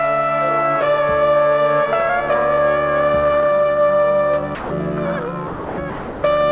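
At 4.55, 5.48 and 5.9 s the sound gives way to steady, featureless noise for 150, 300 and 330 ms, likely sound dropped by the voice detector. Unlike packet-loss gaps, nothing stutters, clicks or repeats.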